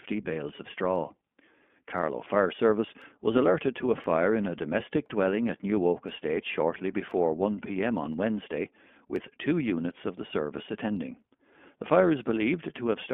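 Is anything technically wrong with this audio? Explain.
Yes. The speech throughout sounds thin, boxed-in and slightly buzzy, with a rough, synthetic edge and no content above about 3.4 kHz or below roughly 200 Hz. That points to the iLBC codec: each short frame is coded on its own, and the damage here is plainly audible. The frame-by-frame roughness fits 20 ms frames and the 15.2 kbps mode, and the telephone band strips away the brightness and body.

From 0.96 s, just after "bales of", to 12.23 s, a tick lands every 1.02 s, about ten in all. These are periodic USB or driver dropouts. At that fixed interval something stalls the audio path, and a tiny sliver of signal, around a tenth of a millisecond, is skipped rather than filled. The waveform jumps across the gap, producing a click heard only while speech is present.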